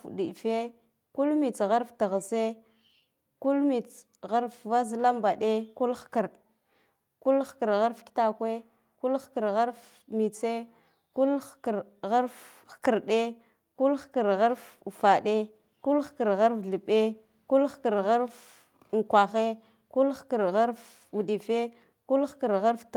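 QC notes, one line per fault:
No faults found in the speech. Nothing to log for any part of the audio.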